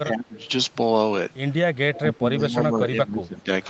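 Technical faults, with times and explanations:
0.07–0.42 s, speech suppressed in double talk: the level sinks by around 20 dB in uneven pieces, likely because an echo canceller mistook the talker for returning echo while the far side spoke. The waveform envelope shrinks abruptly, and spectrogram energy fades in ragged blocks.
1.94–1.99 s, echo leak: a faint, delayed copy of the sound arrives 184 ms after the original and about 15 dB below it, likely loudspeaker pickup the loudspeaker side's canceller failed to remove. The spectrogram shows a brief, weaker repeat of earlier harmonic patterns.
1.96–3.49 s, speech suppressed in double talk: for roughly a second in total, the sound repeatedly ducks by up to about 15 dB and thins out, likely gain reduction during simultaneous talking. The waveform shows choppy, notched amplitude, and the spectrogram shows intermittent gaps and a dulled top end.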